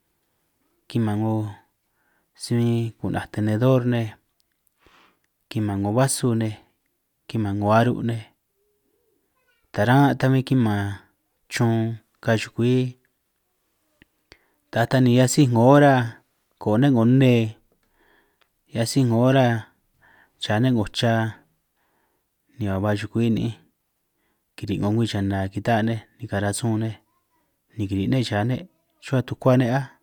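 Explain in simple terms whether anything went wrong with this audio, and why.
Listening to this speech recording, nothing stood out as having gone wrong at any point.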